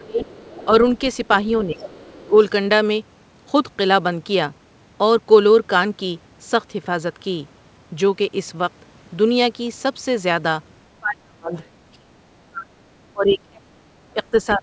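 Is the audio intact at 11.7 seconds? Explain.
No. At 11.7 seconds the talker's speech is being held down by speech suppressed in double talk, which runs from 11.0 seconds to the end of the clip. The level sinks in uneven dips, at its deepest by about 30 dB, and parts drop out in pieces. The likely cause is an echo canceller that heard both ends talking at once, could not tell the talker from the loudspeaker echo, and turned everything down. What separates this from a plain fade or dropout is its timing: the gaps follow the far side's activity and are not steady or periodic.

Just before, from 11.58 to 11.68 seconds, there is a faint scrap of the other side's voice leaking through. It is a brief fragment sitting about 35 dB below the speech, most likely loudspeaker sound that the echo canceller left in the microphone signal. Unlike a delayed copy of the talker's own speech, this fragment is a different voice. 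It stops a few hundredths of a second short of 11.7 seconds, so at that moment only the suppression is still present.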